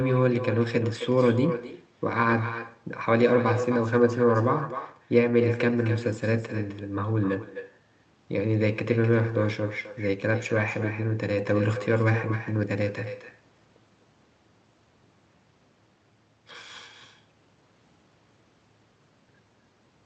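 Throughout the speech, echo with no canceller: the far end's loudspeaker feeds its microphone, returning every phrase roughly a third of a second later, about 10 dB down and thinner.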